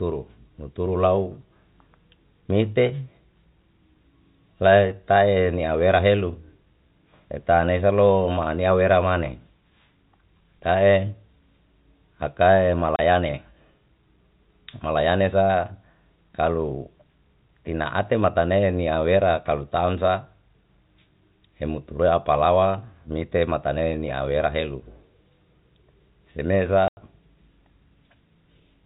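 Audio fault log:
12.96 s and 26.88 s, packet loss filled with silence: abrupt gaps of 30 ms and 90 ms in the telephone-band speech, where missing packets, consistent with 10 ms each, were played back as silence.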